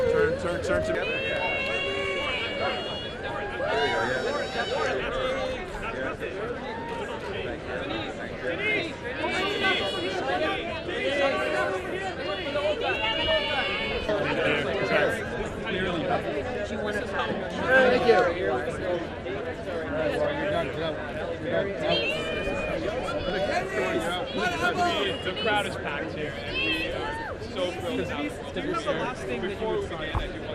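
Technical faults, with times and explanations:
Throughout: MP2 compression. The audio sounds dull and gurgling as upper sub-bands switch on and off, likely from a low rate around 80 kbps. The spectrogram shows flickering gaps in the highs.
13.89–14.56 s and 29.02–29.80 s: DAB burbling. Bit errors corrupt frames, so short blips of noise appear in single sub-bands. The spectrogram shows brief, blocky bursts in separate bands.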